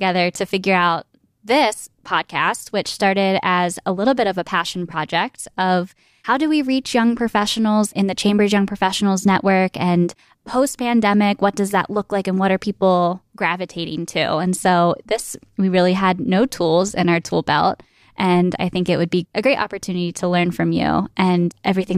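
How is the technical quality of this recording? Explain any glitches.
No technical faults are audible.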